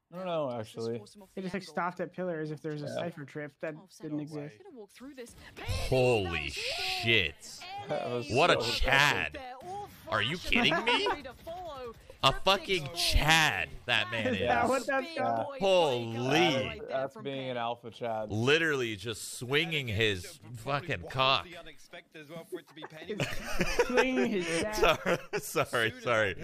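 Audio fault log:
No audible faults detected.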